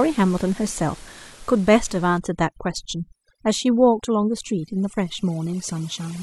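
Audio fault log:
2.18–6.22 s, overdone noise removal: from 2.18 s to the end, the room noise, about 24 dB below the speech before that point, drops and breaks up into twinkling specks. Individual frequency bands are being cut whenever they fall near the noise estimate, and quiet parts of the speech go with them. A noise gate would mute everything at once. Here the bands switch off separately, which is what makes the specks.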